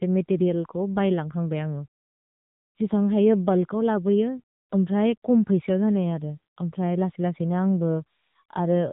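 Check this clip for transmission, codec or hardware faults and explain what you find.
One codec fault runs through the whole clip. The speech carries AMR narrowband mobile codec damage from start to end. Nothing above 3.8 kHz survives, so it sounds muffled and phone-like. The codec rebuilds speech from a vocal-tract model and sparse pulses. The plainly audible buzzy, synthetic edge fits a low mode near 8 kbps.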